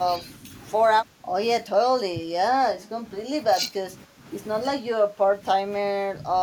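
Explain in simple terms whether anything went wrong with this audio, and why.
The speaker's voice keeps ducking down in short bursts: around 0.19, 1.03, 1.62, 2.07, 2.71, 3.49, 4.81 and 5.67 seconds, each lasting a fraction of a second. The dip near 3.49 is the longest and deepest. That pattern sounds like speech suppressed in double talk. Most likely both ends were talking at once, and the echo canceller, unable to tell this voice from the returning echo, turned everything down.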